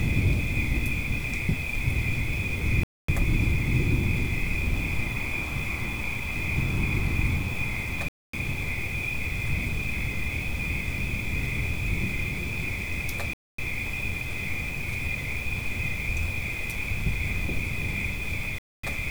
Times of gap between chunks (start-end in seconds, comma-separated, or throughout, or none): 2.83-3.08, 8.08-8.33, 13.33-13.58, 18.58-18.83